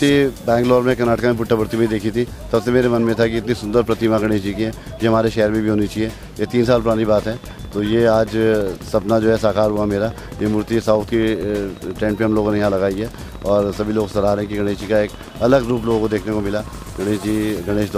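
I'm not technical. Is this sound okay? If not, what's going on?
No, there are two problems. From 3.98 to 4.24 s there's a short patch of DAB burbling, a burst of noise blips over the sound. Weak digital radio reception let corrupted bits slip past error correction, so bits of the audio briefly break into noise blips.

Then from 6.74 s right to 17.92 s there's a train of clicks: steady ticking, about 14.5 clicks a second, around 150 in all, roughly as loud as the sound itself. Likely cause is interference from nearby equipment or a struggling connection injecting regular pulses.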